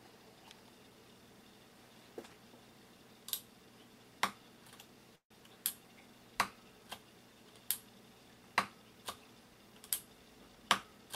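At 5.15 s the sound stalls into a brief fading buzz that drops to silence before resuming at 5.32 s. This is a call audio freeze, likely caused by delayed packets emptying the jitter buffer: the receiver extended the last sound, then went quiet. Nothing is lost, but playback now runs about 150 ms later.

From 10.48 s to 11.07 s the audio runs hurried, about 112% of normal speed at unchanged pitch. This jitter buffer speed-up happens when the buffer holds more audio than it targets. The receiver trims short pitch-period pieces repeatedly, removing around 70 ms in all to reduce the delay.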